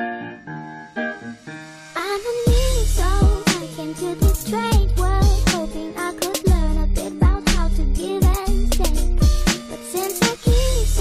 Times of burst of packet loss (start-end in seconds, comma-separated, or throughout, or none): none